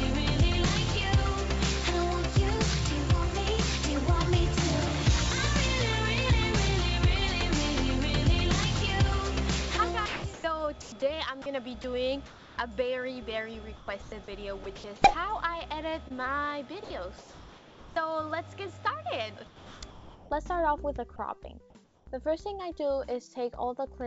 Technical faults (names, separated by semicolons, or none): sound chopped by the voice detector; comfort noise in place of the background; short concealed packet loss; sound dropped by the voice detector